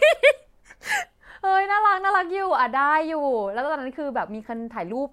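Speech, with nothing technically wrong to point to at any time.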